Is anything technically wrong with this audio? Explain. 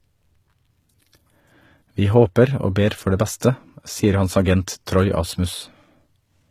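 Yes. Throughout the speech, the treble sounds rebuilt rather than captured, which is likely HE-AAC compression at a very low bitrate, around 20 kbps. Only the lower spectrum is coded and the highs are copied upward, so s sounds come out gritty, metallic or lispy.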